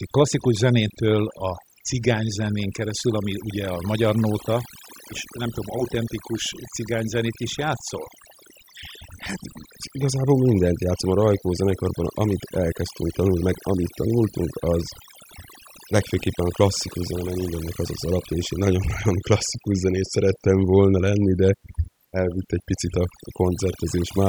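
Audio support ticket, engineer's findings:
Overdone noise removal, whole clip. Background drops and breaks up into twinkling specks. Noise reduction set too strong: bands near the noise estimate pulled far down or off, taking quiet speech detail with them.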